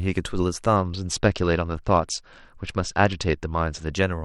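From 0.76 s to 3.93 s the speech goes through a Bluetooth SBC bit pool drop. Under link congestion the encoder starved its sub-bands of bits, which fits a fall from a bit pool near 31 to about 9, roughly 72 kbps. The top bands empty out and the rest are coarsely quantised, so the treble dulls while a gritty noise clings to the voice. Unlike packet loss, the sound never gaps. It degrades continuously, then recovers.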